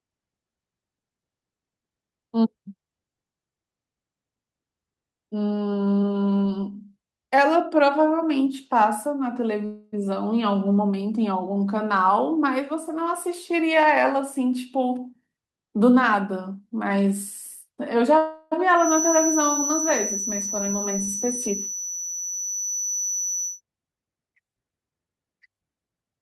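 At 9.65 s the speech stops moving forward and a fading buzzy continuation of the last sound fills about 271 ms, until 10.06 s. This is a call audio freeze, most likely from packets held up in transit while the jitter buffer ran dry. Nothing is lost; the speech resumes where it paused. On a spectrogram the final spectral shape smears horizontally and dims, then normal speech resumes.

From 13.10 to 16.89 s a jitter buffer speed-up plays the speech about 7% fast at unchanged pitch, trimming roughly 0.3 s of backlog in small pitch-period cuts. It sounds slightly hurried. The waveform shows syllables packed closer, with tiny splices between periods.

A second call audio freeze runs from 18.18 to 18.53 s, again likely caused by delayed packets. It sustains and fades the last sound for about 339 ms before the speech continues intact, and shows the same smeared, decaying band on a spectrogram.

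From 18.74 to 23.61 s a feedback whistle sits behind the speech: a thin, steady tone at 5.9 kHz, only a few dB below the speech and swelling and fading slowly in level. The likely cause is a loudspeaker-to-microphone loop held right at the edge of feedback. A spectrogram shows one bright horizontal line across that span.

From 24.27 to 26.21 s a stronger jitter buffer speed-up runs the speech about 15% fast, again removing roughly 0.3 s. The pace is noticeably rushed at the same pitch, and the waveform shows densely compressed syllables.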